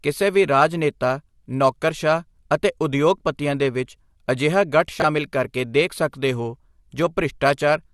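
At 5.00 to 5.04 s there are chunks out of order. Two adjacent 20 ms blocks are swapped: the earlier block reached the output one chunk late and plays after the block that should follow it. No audio is lost, but the 40 ms span runs in the wrong sequence, leaving three hard joins where the waveform jumps. The result is a brief jumbled flicker in the speech.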